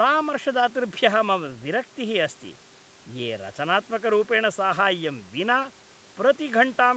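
No faults are audible in this speech; it comes through the call microphone processing and an Opus call path as expected, with nothing above 8 kHz.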